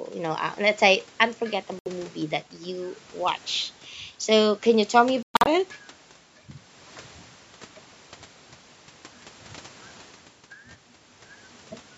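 Audio packets that arrive at the headphones too late are most likely being discarded, a Bluetooth dropout, so the output goes silent until good packets resume. At 1.79 to 1.87 s about 70 ms of speech vanishes in one hole. At 5.23 to 5.48 s the gaps are scattered, 186 ms lost across 232 ms, the longest run 116 ms, giving a stuttering break. Each time the speech picks up further along, as if it had kept playing, under the call's normal 8 kHz top end.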